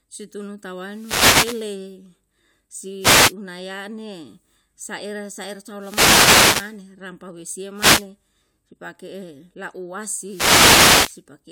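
Wireless microphone noise hits occur at 0.83–1.79, 2.99–3.34, 5.75–6.79, 7.73–8.08 and 10.24–11.23 s: the radio signal fades, and receiver noise swells into bursts of static over the speech.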